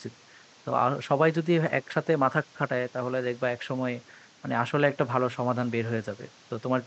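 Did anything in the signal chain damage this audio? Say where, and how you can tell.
No, nothing in the signal chain damaged this audio; the only background is room noise picked up by the microphone, sitting about 29 dB below the speech.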